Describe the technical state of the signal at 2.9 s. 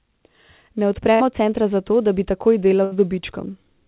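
At 2.9 s the signal is inside a burst of packet loss running from 2.84 to 2.93 s. The receiver filled about 75 ms by stretching the last received sound and fading it, so the speech turns into a brief held buzz or hiss that sinks away, and roughly 80 ms of speech is simply skipped when audio resumes. Unlike a hard dropout, there is no silent hole, just this fading smear, heard through the call path's 4 kHz band limit.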